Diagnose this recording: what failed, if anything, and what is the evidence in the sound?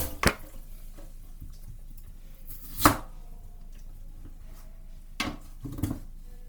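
The codec stage is at fault, with damage that is plainly audible throughout. Tones sound noisy, rough and grainy rather than swirling. Content extends to about 20.2 kHz. This likely points to Opus compression in music mode, where sparse bits at roughly 24 kbps force the encoder to fill bands with noise.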